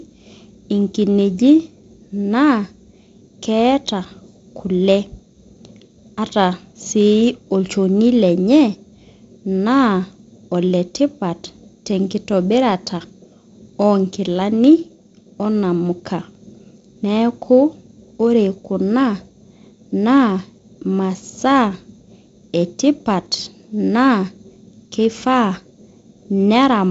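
No technical faults can be heard anywhere in the speech. The G.722 wideband telephone coding is audible as a ceiling at about 7.7 kHz with a light hiss, and the slightly grainier lower band fits the 48 kbit/s mode.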